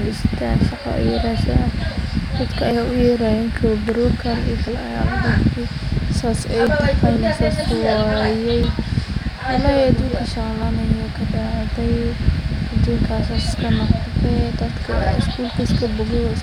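Short skips occur at 0.72, 2.71, 6.67, 8.64, 10.63 and 14.58 to 14.60 s. This is overlap between stream segments. Neighbouring 2-second segments overlapped in time, so 8 to 20 ms of speech was cut away. The waveform jumps, causing tiny skips.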